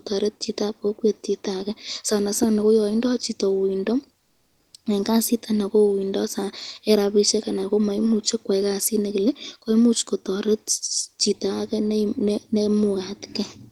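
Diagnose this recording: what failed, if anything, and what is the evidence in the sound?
Comfort noise in place of the background appears from 4.19 to 4.73 s, lasting 540 ms. The real background, about 49 dB below the loudest speech, turns into a steady, featureless hiss at the same level. The likely cause is discontinuous transmission in the codec, as in Opus DTX. The receiver synthesised noise during the pause.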